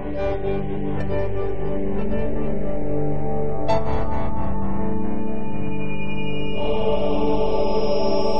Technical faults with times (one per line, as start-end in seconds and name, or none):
0.76 compressed frames skipped